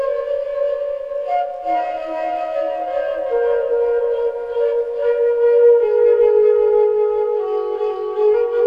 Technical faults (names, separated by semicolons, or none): doubled audio track